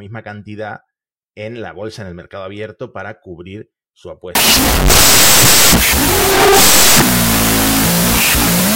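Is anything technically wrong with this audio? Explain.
Yes. From 4.35 s, just after "abierto para cubrir su", to the end of the clip, there is a wrong sample width fault. Audio written as 16-bit integers is being read as unsigned 8-bit values. Each original sample splits into two bytes, so there are twice as many values. The sound therefore plays at half speed and about an octave low. The low bytes sound like noise rather than signal. They become loud hiss, with the speech buried underneath.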